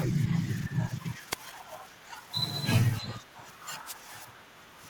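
The radio link from an analogue FM wireless microphone fades twice, as reflected signals briefly cancel the direct one and the receiver's own noise rises through the speech. The first wireless microphone noise hit runs from 1.31 to 1.35 s, a swish of static under 50 ms long. The second, from 3.85 to 3.94 s, lasts nearly twice as long and is heard as a longer burst of hiss over the speech.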